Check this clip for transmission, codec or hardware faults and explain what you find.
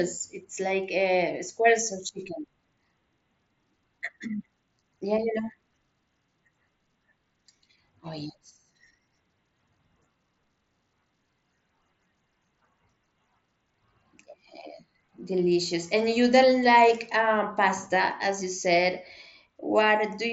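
No faults found in this speech over mSBC.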